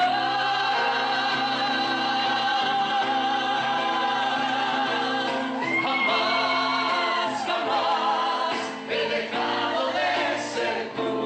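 No dropouts, glitches, clipping or timing breaks turn up anywhere in the audio.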